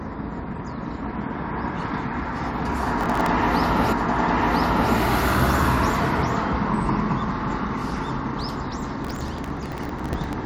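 From 3.01 to 3.26 s there is processor overload crackle. The processor cannot fill its audio buffers in time, and many deadlines slip in a row. Each missed buffer replays a sliver of old audio with hard edges. The grit suggests very short buffers, around a millisecond and a half, with about a dozen or more missed in quick succession. It sounds like a brief, rough tearing laid over the sound.

At 3.91 s a stream segment is repeated. The player queued the same stretch twice, so the audio jumps back and replays it. About one second of sound plays again, through to 4.91 s. A small blip marks the jump.

The crackle returns from 9.05 to 10.33 s, longer this time. Again stale buffer contents fill each missed slot, and this burst points to dozens of misses. The gritty tearing persists for over a second before the load eases.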